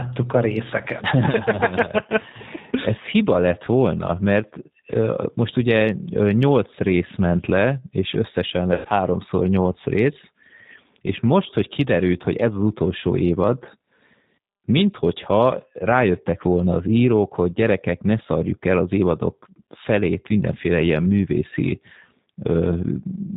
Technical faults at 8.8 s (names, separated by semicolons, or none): G.729 codec; VoIP packet loss concealed by the speech codec